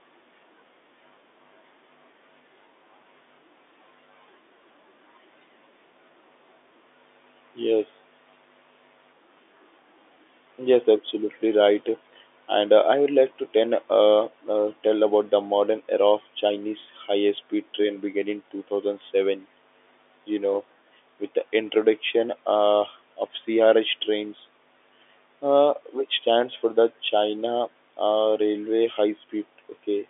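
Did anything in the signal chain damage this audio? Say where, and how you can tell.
No, nothing in the signal chain has damaged this speech. It has the narrow sound of G.711 telephone coding, with the band running from about 300 Hz to 3.6 kHz, nothing above roughly 3.8 kHz, and the coding's faint quantisation noise at most.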